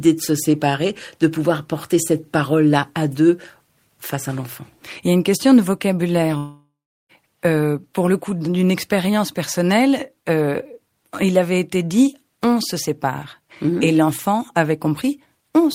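At 6.37 s, after "une question de vocabulaire", a fading buzz replaces the speech, then silence until 7.12 s: likely a long network dropout losing 0.72 s of audio.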